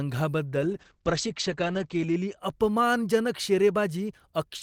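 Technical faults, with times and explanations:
0.57–2.43 s, call bitrate drop: the speech turns rough and watery and loses its brightness, as if a blanket fell over it, then clears again. The call's bandwidth estimate fell and the encoder was made to spend far fewer bits, which fits a fall from about 32 kbps to about 10 kbps. The coarser coding smears detail, and the audio band shrinks from 20 kHz to 8 kHz, muffling the sound for about 1.6 s at its worst.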